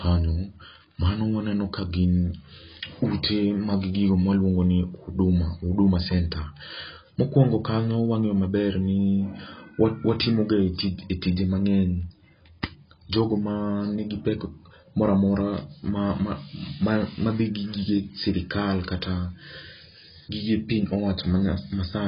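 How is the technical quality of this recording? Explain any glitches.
Pretty rough, honestly, and it's all one problem. AAC compression runs start to finish. It sounds like a heavy, likely low-bitrate AAC-LC encode, around 16 kbps, that cut everything above 5.1 kHz, leaving the speech dull, smeared and fizzy on sibilants.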